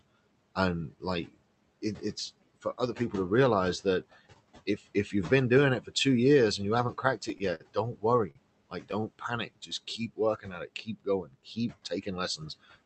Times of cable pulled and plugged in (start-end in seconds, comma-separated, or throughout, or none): none